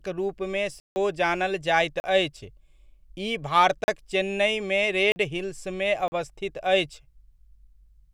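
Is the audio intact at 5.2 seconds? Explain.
No. Just before that point, from 5.12 to 5.16 s, there is a block of digital silence, a 40 ms stretch of silence. The speech drops to dead silence and returns with no fade, and the gap is heard as a short hole.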